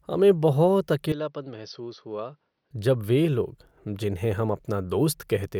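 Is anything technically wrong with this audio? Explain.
Yes. From 1.12 to 2.71 s, just after "हमें बहुत", the speech turns dull and drops about 10 dB. Nothing remains above 6.1 kHz, and a faint new noise floor appears. This is likely an input switched to a poorer device, a narrower-band microphone with its own tone and level.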